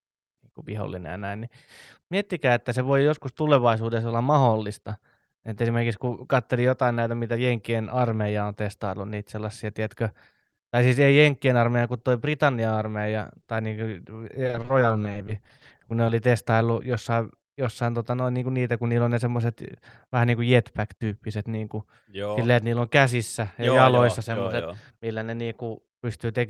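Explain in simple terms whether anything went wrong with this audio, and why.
Two faults affect this speech. From 14.43 to 16.09 s there is repeated packet loss, heard as a robotic sound: 28 short gaps, none longer than 30 ms, were each patched by stretching the preceding sound, so about a fifth of that stretch is filler and the voice turns choppy.

From 18.10 to 18.43 s a jitter buffer speed-up occurs. The receiver had built up too much delay and trimmed tiny slices, roughly 40 ms in total, to catch up, so the speech briefly runs about 10% fast at unchanged pitch, sounding rushed.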